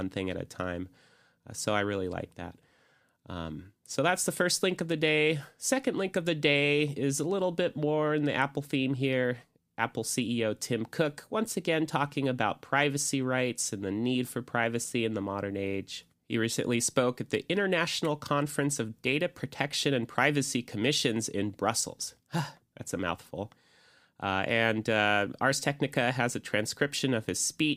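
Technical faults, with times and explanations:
No technical faults can be heard in this speech clip.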